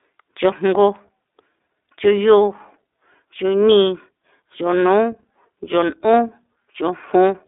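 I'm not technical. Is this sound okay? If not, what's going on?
No. Throughout the whole clip the speech carries iLBC codec damage, and it is plainly audible. iLBC is a phone-call codec that rebuilds the voice in 20 ms slices, each coded on its own without help from the slice before. That gives the slightly rough, synthetic edge you hear. It also confines the sound to a narrow telephone band of roughly 300 Hz to 3.7 kHz, with nothing above 3.8 kHz, so the voice sounds thin and muffled.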